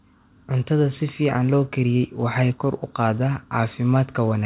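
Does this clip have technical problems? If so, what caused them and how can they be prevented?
No, nothing in this speech needs fixing: it came over a WebRTC call path using G.711 mu-law at 64 kbps, so the lack of anything above 4 kHz is that narrowband codec doing its normal job, not a problem to prevent.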